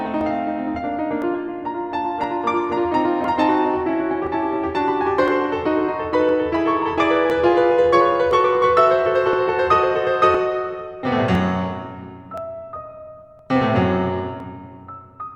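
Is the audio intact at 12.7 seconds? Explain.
No. The moment sits inside a run of periodic USB or driver dropouts lasting from 0.21 s to 14.40 s: every 1.01 s a background task stalls the USB bus or audio driver, and roughly 10 ms of the music is skipped outright rather than padded with silence. Each skip leaves a small discontinuity in the waveform, heard as an evenly spaced tick or pop, about one per second across the music around 12.7 s.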